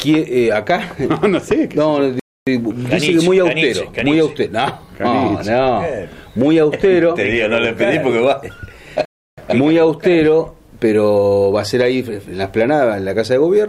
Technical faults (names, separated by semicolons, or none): playback stall